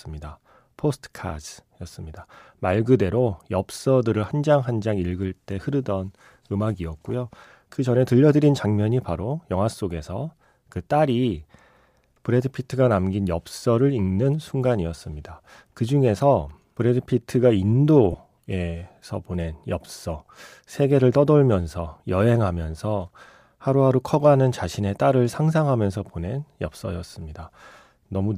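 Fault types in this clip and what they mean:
Lost LE Audio frames: At 18.12 to 18.14 s, about 22.5 ms of audio drops out. The LC3 decoder covers the gap by repeating the last spectrum with scrambled signs. The speech briefly turns into a short noisy smear. The gap fits three 7.5 ms frames.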